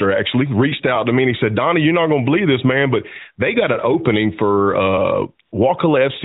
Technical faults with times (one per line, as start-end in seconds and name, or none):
5.46-5.52 AMR comfort noise